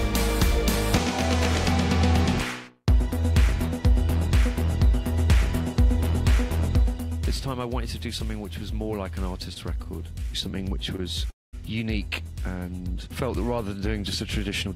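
At 9.53 s and 10.96 s, short stalls from a late packet stretch the last sound by 22 ms and 21 ms, appearing as brief smeared, repeated spectral bands.

From 11.30 to 11.55 s, a call audio freeze briefly continues the sound, then leaves 200 ms of silence, a blank spectrogram gap, likely from delayed packets emptying the jitter buffer.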